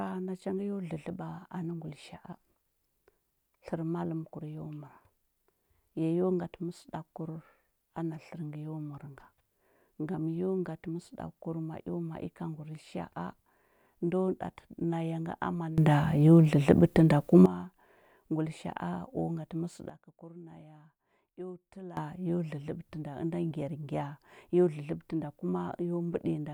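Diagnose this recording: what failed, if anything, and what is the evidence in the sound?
A sudden gain jump, likely a digital gain setting applied without a ramp, hits twice. Speech and background noise rise together by about 16 dB from 15.78 to 17.46 s, then fall by about 15 dB from 19.90 to 21.97 s, each change abrupt.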